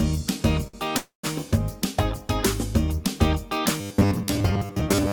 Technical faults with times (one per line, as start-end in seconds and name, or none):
0.67-0.76 short stall from a late packet
0.97-1.26 call audio freeze
3.80-5.13 robotic sound from repeated short buffers